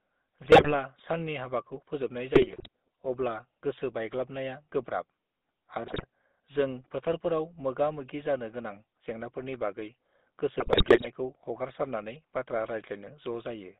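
GSM full-rate codec damage runs through this whole speech clip. The line is confined to roughly 200 Hz to 3.7 kHz, and the voice carries the plainly audible buzzy, gravelly texture of a coder that models the vocal tract and excites it with a coarse, regularly spaced pulse train, which fits a 13 kbit/s full-rate stream. GSM bit errors then break in at 0.44–0.73 s, 2.30–2.68 s, 5.86–6.06 s and 10.58–11.07 s. Corrupted bits reach the decoder and scramble its filter, pitch and gain parameters, so individual frames come out with a warped spectrum or a sudden jump in level. The voice turns into squawks, pops and gargling during those stretches. The burst at 5.86 s has the highest error rate, near 8 percent against about 4 to 5 percent in the others.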